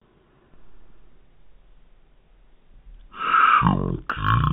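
From start to finish the speech is heard as stereo read as mono: the interleaved left and right samples have been taken one after the other as a single channel, so each moment of sound is stretched across twice as many samples. Playback runs at half speed, 0.5x, and the pitch sits an octave low, 12 semitones down, giving a slow, heavy, drawn-out delivery, with a fainter mirrored copy of the sound folded into the upper half of the spectrum.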